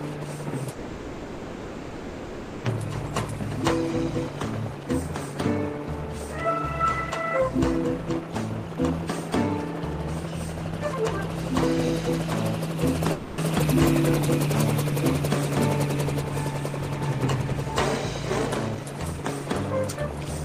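From 0.71 to 2.64 s a call audio freeze holds the last sound as a fading buzz for 1.92 s, likely from delayed packets. Playback then resumes where it stopped, so nothing is lost, unlike a dropout. From 4.31 to 8.91 s a jitter buffer speed-up plays at 102% with unchanged pitch, trimming about 70 ms in small pieces rather than cutting one block. A second freeze fills 13.12 to 13.39 s. At 13.60 s a skip ahead jumps forward with no gap, discarding around two seconds of audio; the join is almost seamless rather than stalled. From 16.05 to 18.85 s another 102% speed-up removes about 50 ms.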